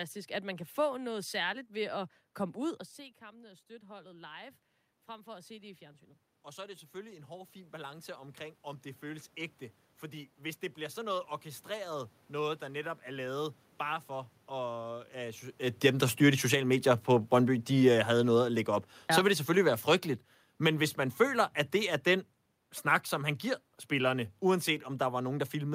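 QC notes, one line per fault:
2.96–12.98 s, automatic gain rising: Just before this, around 2.5 s, the talker moves away and the voice drops by about 18 dB at the microphone. The automatic gain control responds by slowly raising its gain by about 16 dB over roughly ten seconds, so the level creeps back up. A talker returning would lift only the voice, but here the room noise swells along with it.
15.7–25.74 s, automatic gain falling: Around 15.5 s the talker comes closer and the sound arrives loud. The automatic gain control finds the input too hot and lowers its gain gradually, so the level sinks steadily through to the end of the clip. A talker leaning back would drop only the voice and leave the room noise steady, but here the background fades down together with the voice.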